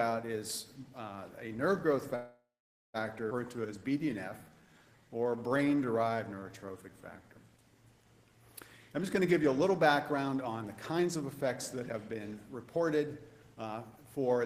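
From 2.15 s to 2.97 s the sound stalls in a call audio freeze, likely because packets were held up and the jitter buffer ran dry. The last sound is stretched into a fading fill for about 0.8 s, ending in roughly 0.5 s of silence, then resumes where it stopped with nothing lost.

At 3.30 s comes a skip ahead: around 0.4 s of audio was dropped while later packets were already queued. Playback jumps forward with almost no gap, and the two sides are joined nearly directly.

From 3.56 s to 7.29 s a jitter buffer slow-down rebuilds the reserve by repeating pitch periods and bits of pauses, adding about 438 ms. The sound runs at 88% speed at unchanged pitch, drawn out.

Two jitter buffer speed-ups follow, trimming excess delay by cutting short pitch-period pieces. From 8.96 s to 13.07 s roughly half a second is removed, giving 113% speed. From 13.54 s to 14.44 s roughly 0.15 s goes, giving 116%. 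Both sound hurried at the same pitch.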